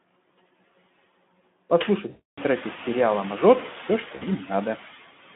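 Throughout the speech the background pumps: it sinks by about 14 dB in the gaps and swells back up under each phrase. These are noise suppressor artifacts. A suppressor judges, frame by frame, which frequency bands hold steady noise and turns them down, so the noise floor rides up and down with the voice. This becomes more noticeable once the room noise climbs, roughly 2.5 s in.

From 2.09 to 2.41 s the voice dissolves into a stretched, fading buzzy tone or coloured noise over 280 ms of lost audio, consistent with about fourteen 20 ms frames. A second, 60 ms dropout from 4.15 to 4.27 s gives a shorter smear. Both are VoIP packet loss concealed by the speech codec. With packets missing, the narrowband Speex decoder keeps repeating its last pitch and spectral shape at falling gain.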